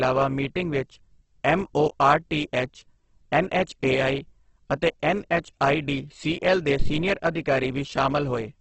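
Throughout the speech, the sound is grainy, rough and noisy in texture, with nothing above 8.2 kHz. This is likely Opus compression in its music mode at a very low rate, around 12 kbps. Starved of bits, it fills bands with folded or noise-like content. A spectrogram shows a hard ceiling and smeared, speckled harmonics.

At 6.80 to 6.96 s, just after "ਅਤੇ ਐੱਨਐੱਚਆਈਡੀਸੀਐੱਲ ਦੇ", a phantom power thump occurs. A supply switching on or off on the live input sends a voltage step through the coupling capacitors, producing a deep thud that decays in about 36 ms. The waveform shows a low-frequency swing, and the spectrogram shows a brief dark blot at the bottom.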